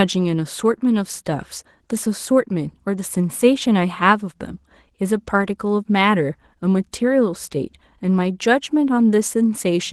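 Across the whole speech clip the voice sounds hoarse and slightly robotic, and the damage is plainly audible. This is Opus voice compression at a low bitrate, which fits about 16 kbps. The codec runs in hybrid mode: a linear-prediction SILK layer codes the lower band and a CELT layer handles content above 8 kHz. The band stays fullband, but the excitation is coded coarsely, with 20 ms frames.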